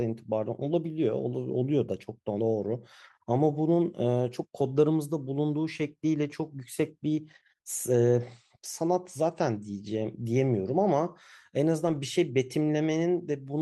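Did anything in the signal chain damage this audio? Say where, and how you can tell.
Yes, at the network stage: lost packets rebuilt from error correction at 2.71–2.73 s and 11.87–11.97 s. The speech never breaks, but both spots turn briefly rough and noisy. The following packets carried low-bitrate copies, so nothing smears or fades as concealment would.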